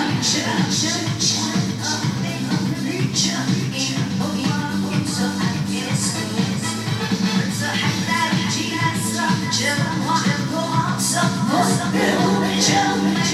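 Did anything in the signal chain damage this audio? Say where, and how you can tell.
Yes. A doubled audio track runs throughout: a full-band copy trails the original by roughly 0.7 s, about 5 dB quieter, with no decay or room colour. The likely cause is a second, slower capture path mixed back in at the driver or buffer stage. A spectrogram shows every pattern repeated at that fixed offset, and the waveform shows matching envelopes laid over each other.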